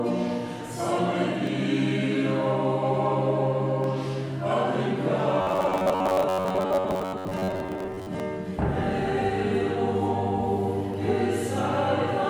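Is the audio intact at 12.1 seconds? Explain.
Yes, the audio at 12.1 seconds plays through intact, with no dropout, click, distortion or other fault at that point.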